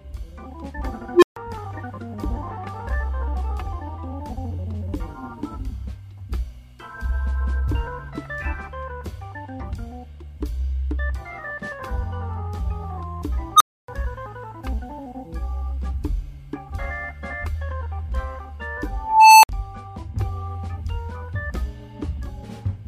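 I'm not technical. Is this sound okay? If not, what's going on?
No. There are three bursts from an unstable filter. Part of the processing has gone out of control, so it feeds on itself and a tone swells until it breaks up and drops out. At 1.13 s a low beep builds in about 90 ms, then goes silent for 140 ms. At 13.56 s a high squeal, around 1.5 kHz, rises in about 40 ms, then goes silent for 280 ms. At 18.90 s a whistle near 1 kHz climbs over half a second, then drops out for 60 ms.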